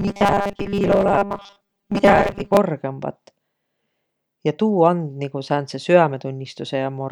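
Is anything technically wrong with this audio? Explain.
Yes, there's robotic sound from repeated short buffers from the start to about 2.57 s. The speech turns into a stiff, metallic buzz locked at 200 Hz that still roughly tracks the words. The likely cause is new audio arriving too slowly, so the playback keeps looping the last 5 ms of sound to fill the gaps, for roughly two-thirds or more of that stretch. That 5 ms loop produces the 200 Hz pitch, and the real audio in between gets skipped.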